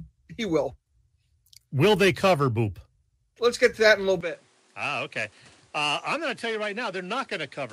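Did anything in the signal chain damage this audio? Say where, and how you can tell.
Yes. From 4.21 s the speech abruptly drops about 10 dB, turns duller with nothing above 11.4 kHz, and gains new background noise: likely the input switched to a poorer device.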